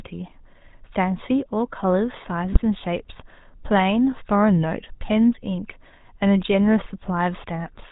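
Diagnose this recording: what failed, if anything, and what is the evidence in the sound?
GSM full-rate codec, present throughout the 8-second speech recording, is a codec-stage fault. The audio has nothing above 4 kHz and a plainly audible buzzy, gravelly roughness on every voiced stretch, which fits a 13 kbps full-rate coder. It replaces the real signal with a vocal-tract filter driven by a regular pulse train, keeping only one excitation sample in three. That coarse excitation is where the rasp comes from, and the narrow band dulls the consonants.

GSM bit errors appear at 2.52 to 2.60 s, an 80 ms burst of squawking, popping and gargling that cuts through the coded speech. This points to the radio link, where a bit-error rate of a couple of percent corrupted a handful of consecutive frames. Flipped bits in the filter, pitch or gain parameters made the decoder rebuild those frames with a distorted spectrum and level before the stream recovered.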